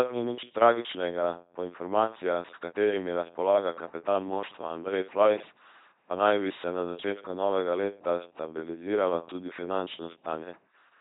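From start to finish the speech passes through an LPC-10 vocoder at 2.4 kbit/s, heavily damaged. Each frame excites a short all-pole filter with either a pulse train or noise, giving a buzzing robotic voice. A spectrogram shows rigid harmonic combs or flat hiss, and nothing above 3.8 kHz.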